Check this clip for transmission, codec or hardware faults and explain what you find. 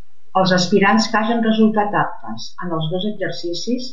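There's one fault here, a DC offset, and it runs through the whole speech clip from start to finish. The entire waveform sits shifted off the zero line by a constant amount, at about -27 dBFS. You won't hear it as such, but it shows up as steady energy right at the bottom of the spectrum, and it eats into headroom.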